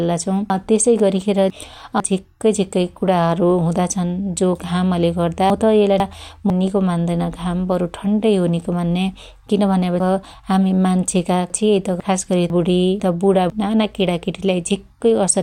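Chunks out of order at 0.5–2.0 s, 5.5–6.5 s, 10.0–12.0 s and 12.5–13.5 s in this speech: a 500 ms chunk arrives late by one to three chunks, so speech jumbles briefly and each swap leaves three hard joins.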